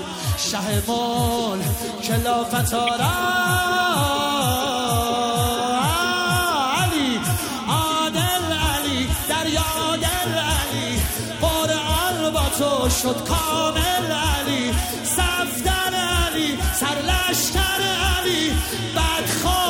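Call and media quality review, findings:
Corrupt frame decoded, 2.87–2.89 s: brief chirp-like blip, loud, around -10 dBFS at peak, lasting one frame. Codec decode path: flipped bits in a single compressed frame misread gains and codes, putting energy at the wrong frequencies until the next clean frame.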